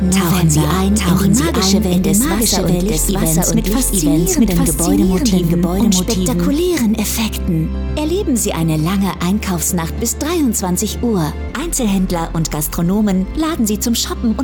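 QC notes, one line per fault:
0.0–6.6 s, doubled audio track: an equally loud, dry copy trails about a second behind and ends abruptly, likely from a slower second capture path mixed in.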